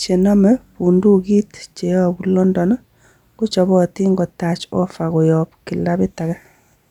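No dropouts, clicks, distortion or level jumps are audible anywhere in the speech.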